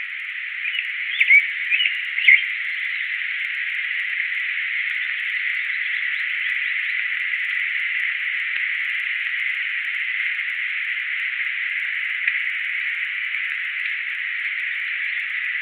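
A recording of sounds carries a steady ticking at 20 Hz from start to finish, heard wherever sound is present. The resampler restarted on every block while converting 48 kHz to 24 kHz, so each 50 ms block edge picks up a small error.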